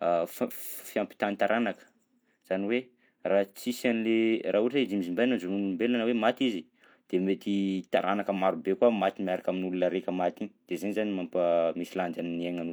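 Nothing stood out as a technical problem on listening to this speech recording.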